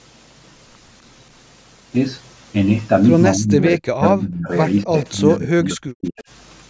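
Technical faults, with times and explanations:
3.35–4.5 s, 4.84–4.94 s and 5.11–6.24 s, speech suppressed in double talk: the speech sinks or cuts out, likely because an echo canceller mistook overlapping far-end talk for echo. The waveform shows deep gaps of roughly 25 to 40 dB, and the spectrogram shows energy fading to near-blank patches.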